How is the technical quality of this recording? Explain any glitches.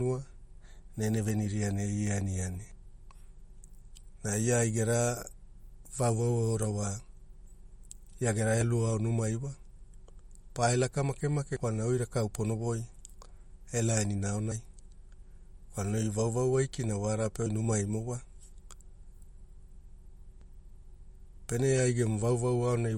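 The recording is damaged by lossy compression throughout and by four brief skips.

MP3 compression, throughout: the speech sounds watery and smeared, with nothing above 17.2 kHz. This likely comes from a low MP3 bitrate of around 48 kbps, which discards detail the encoder judged unimportant.

Audio missing between chunks, at 2.71, 8.61, 11.56 and 20.41 s: about a twentieth of a second drops out, and the speech on either side joins abruptly. One skip falls right after "ia gera", and another between "pae laka make make" and "oi rakaau pono voi". This likely comes from processing in chunks of about 3 s.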